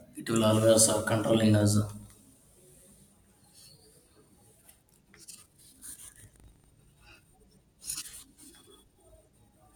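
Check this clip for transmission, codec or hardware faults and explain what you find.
One hardware fault appears. From 5.6 to 6.75 s the speech takes on a rattling 25 Hz buzz. This is buffer tearing: writer and reader cross inside each 40 ms period, splicing in a sliver of audio from roughly 150 ms earlier.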